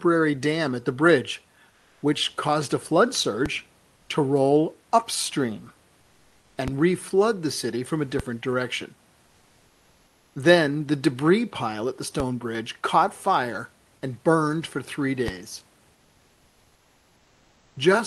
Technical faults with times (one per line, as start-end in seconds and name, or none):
1.70-2.02 comfort noise in place of the background
3.46 DC step
6.68 DC step
8.20 DC step
12.20 DC step
15.28 DC step